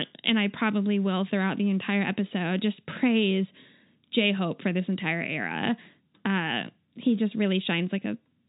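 Nothing technically amiss stood out on listening to this speech recording.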